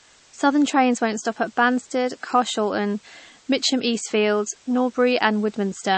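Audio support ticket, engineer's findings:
Low bit depth with dither, entire clip. Requantisation to very few bits with dither applied, which fits an 8-bit stage. Rounding error spread into constant, even white hiss, roughly 30 dB below the speech. No distortion, just a steady noise floor.

Low-bitrate audio saved at a high bitrate, entire clip. Band-limited with nothing above 8.3 kHz, plus artefacts left from the first lossy encode. Likely cause is an MP3 made at around 32 kbit/s and re-encoded at about 192 kbit/s. Re-encode restores no lost detail.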